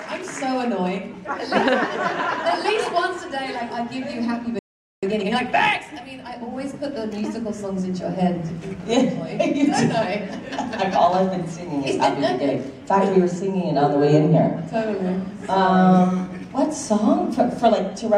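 The audio cuts out dead at 4.59 s and stays silent until 5.03 s, so you get a gap of about 440 ms right in mid-flow. That's a playback stall. The player most likely ran dry of buffered data, or its output thread got held up, and it simply had nothing to send until it recovered. From 5.03 s to 5.89 s you then hear time-compressed catch-up. The player is working off the backlog the stall left behind by trimming out small slices and cross-fading across the joins, which runs the material at about 1.5 times normal speed. The pitch stays where it should be, but that stretch sounds noticeably rushed.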